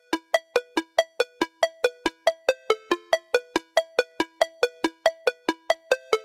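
At 0.42–0.76 s, 1.73–2.15 s, 2.36–2.69 s, 3.21–3.54 s, 3.88–4.19 s and 4.51–4.83 s the sound is cut by the noise suppressor, which mistakes parts of it for background noise and pulls them down. Each dip lasts a few hundred milliseconds and bottoms out at about 12 dB in the first, about 8–9 dB in the middle four, and about 5 dB in the last, heard as the sound sinking momentarily.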